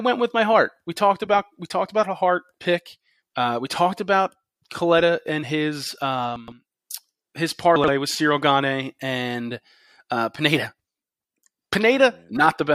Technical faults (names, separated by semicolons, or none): chunks out of order